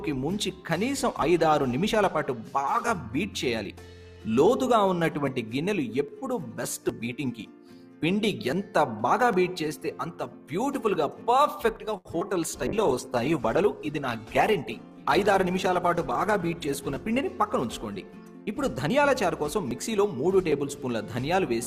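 At 11.97 s a late packet causes a short stall of about 77 ms. The jitter buffer ran dry and the receiver held the last sound until the packet came, so nothing is lost but the sound lingers with a faint buzz. A spectrogram shows frozen, smeared harmonics, and the playout delay grows by the same 77 ms.

Just after, from 12.19 to 12.23 s, a short concealed packet loss follows. About 40 ms of audio never arrived, and roughly 16 ms of synthesized continuation covers the hole, dropping delay by around 20 ms. It is heard as a quick smear or wobble. The waveform shows a brief splice that blends back into the real audio.

From 12.67 to 19.05 s a call bitrate drop takes the encoder from 64 kbps down to 15 kbps, staying at that floor for about 4.35 s. The coarser coding makes the sound rough and muffled. On a spectrogram the upper frequencies thin out and fall away, and the remaining detail looks blotchy.

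Inside that stretch, from 14.65 to 15.18 s, a jitter buffer speed-up plays audio at about 107% while keeping pitch, trimming roughly 50 ms in small pitch-period cuts. The passage sounds hurried. The waveform shows a slightly compressed timeline with many tiny joins.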